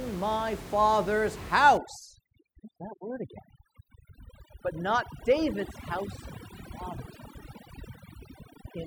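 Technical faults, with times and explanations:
1.77 to 8.86 s, overdone noise removal: room noise about 12 dB below the speech drops and breaks up into twinkling specks, while quiet speech bands vanish with it.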